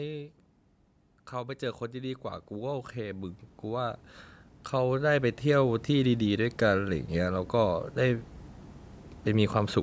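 From 1.31 to 4.08 s, automatic gain rising lifts the level by about 10 dB. The control judged the speech too quiet. Voice and background swell together. It happens again from 4.71 to 8.32 s, by about 8 dB. The call band stops near 8 kHz.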